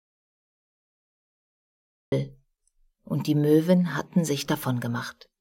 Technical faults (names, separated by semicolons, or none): audio dropout to silence